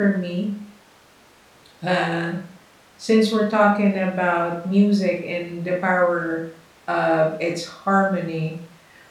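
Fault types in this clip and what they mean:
No faults are present in this clip.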